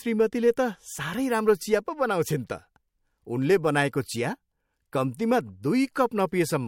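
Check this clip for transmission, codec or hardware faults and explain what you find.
One codec fault stands out: pre-echo at 5.94 s. A hiss rises by about 19 dB over the 18 ms just before a sharp speech attack, smearing it. The quantisation noise spread back across a block, which fits a 26 ms transform window without short blocks. On a spectrogram, broadband haze precedes the onset; the waveform shows a fuzzy ramp.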